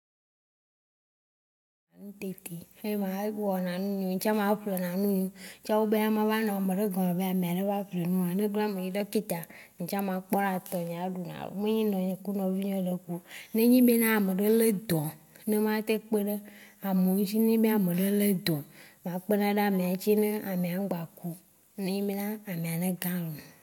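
No technical faults can be heard in the speech recording, which rises in a smooth, editor-style fade-in from around 2 s to full level by 2.42 s.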